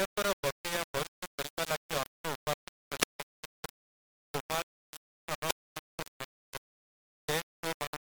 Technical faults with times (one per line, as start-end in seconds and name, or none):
0.00-8.03 low bit depth without dither